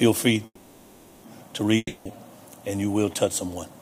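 At 0.45 s the sound stops moving forward and the last fragment is stretched into a buzzy, fading hiss lasting about 0.78 s, ending in a brief silence before the audio resumes at 1.25 s. This is a call audio freeze, likely from packets held up in transit until the jitter buffer ran dry. It differs from a dropout because nothing is skipped: playback picks up exactly where it halted, leaving everything after it about 0.78 s late.

At 1.77 s the sound again decays into a fading hiss lasting about 0.28 s, with a short silence before audio returns at 2.18 s. This is a long network dropout, likely caused by packets that never arrived and were given up on. It differs from the freeze because, when the audio comes back, it has jumped ahead: roughly 0.28 s of material is simply gone, so the sound resumes mid-stream instead of continuing from the point where it broke off.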